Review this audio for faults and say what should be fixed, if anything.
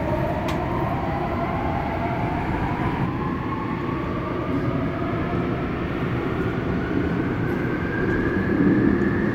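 A doubled audio track runs from the very start of the clip to 3.06 s. A second full-band copy of the audio trails the original by roughly 0.7 s at about the same level, so every event is heard twice. The copy has no decay or room colouring, and it cuts off abruptly at 3.06 s. The likely cause is the same signal reaching the mix twice, once directly and once through a slower capture path or a misaligned edit. To prevent it, route each source through a single path and check edits for overlapping duplicate regions before export.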